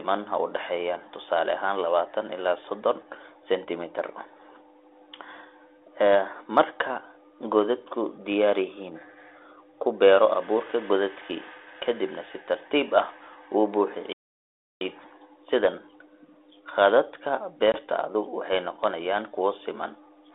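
Playback stall, 14.13 to 14.81 s: the speech cuts out mid-flow for about 0.68 s of silence, then resumes. The likely cause is the player running short of data or its output thread being blocked, so nothing reached the output until it recovered.

Packet loss on an ADPCM call, 17.72 to 17.77 s: about 20 ms of speech, roughly one packet, drops to sharp-edged silence just before "waxay noqonayaan kuwo siman". The G.726 decoder's adaptive predictor and step size fall out of step with the sender, so the returning speech briefly comes back with slight distortion, settling within some tens of milliseconds. The telephone band of 300 Hz to 3.6 kHz and the light codec damage fit G.726 at 32 kbit/s.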